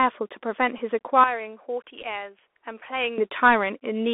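Bluetooth CVSD headset codec damage runs through the whole clip. One-bit delta coding, consistent with a 64 kbps stream, confines the audio to roughly 250 Hz to 3.6 kHz, leaving plainly audible granular hiss and scratchy sibilants.

A Bluetooth headset packet repeated at 0.78 to 0.80 s. After lost packets, the decoder replayed old data for about 11.2 ms, which fits three lost packets and comes through as a brief buzzing blip.

From 1.24 to 3.18 s the sound abruptly turns duller and about 10 dB quieter, with nothing above 3.4 kHz and no gap at either transition. The likely cause is an input switched to a poorer device.

Within that stretch, at 2.02 to 2.04 s, another Bluetooth headset packet repeat replaces about 11.2 ms of audio with recycled data, producing the same short buzz.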